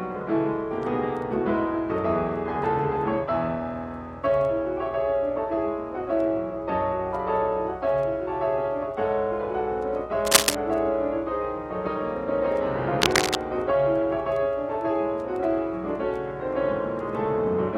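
Two short bursts of scratchy, rustling noise break over the audio, from 10.25 to 10.55 s and again from 13.00 to 13.35 s. The first is somewhat louder than the sound it covers, and the second sits at about the same level. This is cable scratch noise, likely from a worn cable, connector or control carrying a DC voltage being moved, so its contact resistance jumps around and injects dense, uneven noise.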